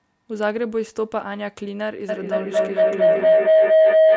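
From 2.09 s to the end, feedback howl builds. A tone near 700 Hz repeats about every 200 ms, rising to about 10 dB above the speech.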